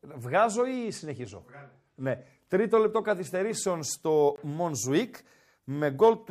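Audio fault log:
0.74–2.26 s Bluetooth SBC bit pool drop: the link likely congested and the encoder lowered its bit pool, roughly halved toward 105 kbps, starving upper sub-bands, so the speech dulls and turns gritty.
4.36–4.38 s block of digital silence: a 20 ms block of samples was zeroed, so the speech cuts to silence without a fade, leaving a brief hole.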